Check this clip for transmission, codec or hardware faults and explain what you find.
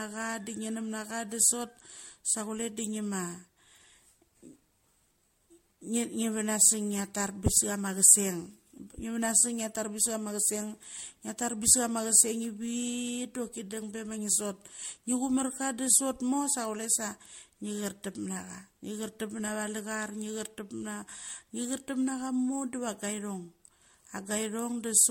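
One codec fault runs through the whole speech clip. Generation loss: the sound is swirly, smeared and hollow, with blurred attacks and nothing above 16.5 kHz. The likely cause is repeated MP3 decoding and re-encoding, around four passes, consistent with 64 kbit/s, each requantising on a shifted frame grid so noise and spectral holes accumulate.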